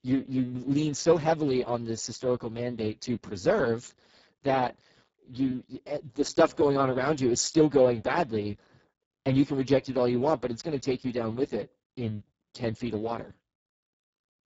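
A speech recording that sounds hoarse, buzzy and noisy from start to finish, with the voice edging towards a robotic, vocoder-like quality and nothing at all above 7.7 kHz. The cause is heavy Speex codec compression at a very low quality setting, which fits a bitrate of around 6 kbps. So few bits remain for the excitation signal that the natural voice texture collapses, and the upper band above 4 kHz is only a shaped, hissy noise fill.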